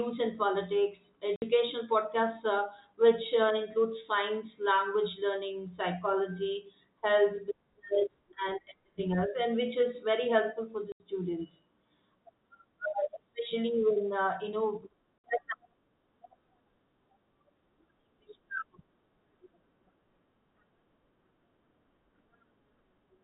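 At 1.36 to 1.42 s, 10.92 to 11.0 s and 15.18 to 15.24 s the speech drops out completely: packet loss filled with silence. Lost packets were replaced with silence, leaving gaps of 60, 80 and 60 ms, all multiples of 20 ms, which fits 20 ms packets. Each gap has hard edges. The waveform shows flat lines with abrupt cut-offs, and the spectrogram shows blank vertical slots across the narrow telephone band.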